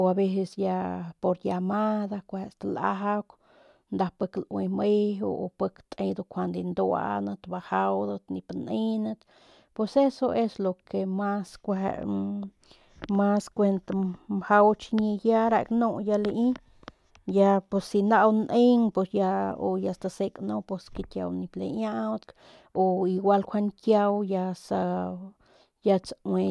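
No technical faults can be heard anywhere in the recording. The speech carries on steadily, with nothing in the signal drawing attention to itself.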